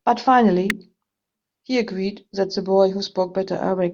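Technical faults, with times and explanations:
0.70 s, electrical switching spike: a sharp snap laid over the speech, peaking around -5 dBFS and gone in a few milliseconds. That's most likely a nearby switch, motor or static discharge arcing and the audio line catching the burst.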